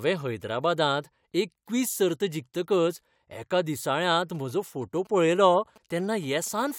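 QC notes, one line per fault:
4.02 to 6.72 s, GSM signalling bursts: a galloping dit-dit-dit of short buzzes sits well below the speech. A nearby 2G phone is signalling in short radio bursts. The audio circuit rectifies them into a buzz that repeats at 217 Hz.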